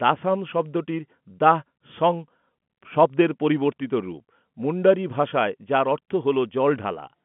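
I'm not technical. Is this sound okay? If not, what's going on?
Yes, nothing is wrong here: the speech has the ordinary narrow sound of a telephone line, with G.711 telephone coding leaving nothing above about 3.8 kHz, which is expected for a phone call.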